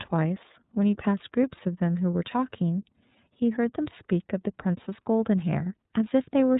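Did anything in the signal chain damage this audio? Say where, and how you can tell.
Yes, at the codec stage: iLBC coding throughout leaves speech rough and synthetic, with a hard spectrogram ceiling near 3.8 kHz, fitting 30 ms independently coded frames at 13.33 kbps.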